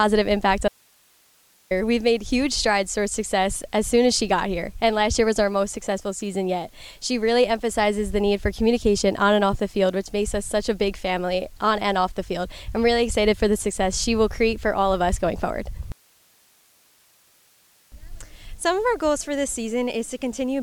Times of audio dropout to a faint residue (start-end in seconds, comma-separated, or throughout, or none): 0.68-1.71